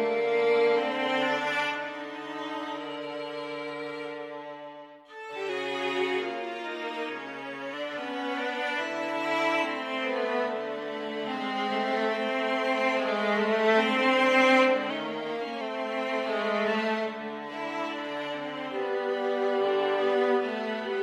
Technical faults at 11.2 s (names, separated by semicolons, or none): none